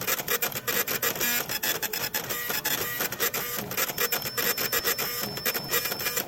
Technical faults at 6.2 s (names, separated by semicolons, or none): feedback whistle